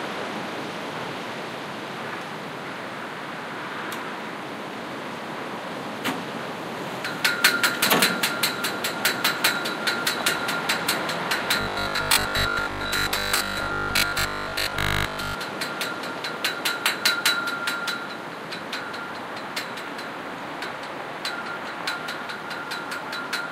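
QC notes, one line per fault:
11.61–15.35 s: robotic sound from repeated short buffers. The sound turns into a rigid, metallic 50 Hz buzz, likely from a 20 ms block replayed for most of the span while new audio is skipped. A spectrogram shows even 50 Hz harmonic stripes, and the waveform shows identical 20 ms cycles.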